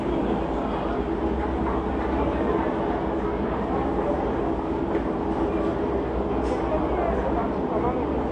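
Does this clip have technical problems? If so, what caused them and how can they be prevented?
Yes. Throughout the clip, the top end is cut off, and the audio sounds dull and smeared, which points to a low bitrate around 32 kbps. The likely cause is AAC compression. Unlike a plain low-pass filter, which only removes the top end, the codec also quantises the remaining spectrum coarsely, so the damage is plainly audible below the cut-off too. To prevent it, encode at a higher bitrate or keep a lossless copy.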